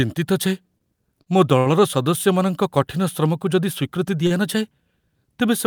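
Short stalls from a late packet occur at 0.78, 1.22, 1.59 and 4.27 s. The jitter buffer ran empty, so the last sound is held for 18, 43, 70 and 34 ms with a slight buzz or dip, then resumes. Unlike packet loss, nothing is skipped; timing simply slips later.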